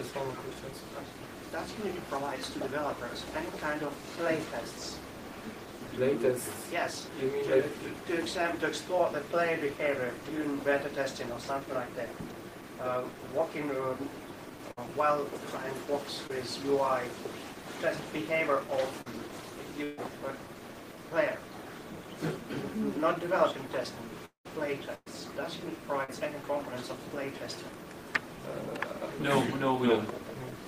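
Around 14.71 to 14.79 s there's a burst of packet loss: roughly 60 ms of audio never got played, and the receiver papered over it by stretching the last bit of sound and fading it down. You hear a brief held, dulled smear, then the audio jumps ahead past the missing chunk.

At 16.27 to 16.31 s and again at 19.01 to 19.08 s you get short concealed packet loss, about 20 ms and 40 ms missing respectively. These are much subtler, just a quick smear or wobble where the decoder invented a few hundredths of a second from the preceding sound and blended back into the real signal.

Right after that, at 19.84 to 19.99 s, comes a bigger burst of packet loss with about 140 ms gone. The fill covers the whole gap with no silence, so it comes across as a sustained buzzy or hissy tail that sags in level before the audio picks up again further along.

From 24.25 to 24.47 s the sound continues as a decaying buzz or hiss, then drops to about 120 ms of silence before returning with roughly 200 ms missing. 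That's likely a long network dropout, where nothing arrived for long enough that the concealment gave up.

Another burst of packet loss follows at 24.95 to 25.08 s, about 120 ms lost, with the stretched sound fading out into around 30 ms of silence before the audio resumes.

The last one is short concealed packet loss at 26.04 to 26.10 s, roughly 40 ms missing, heard as a small smear or wobble.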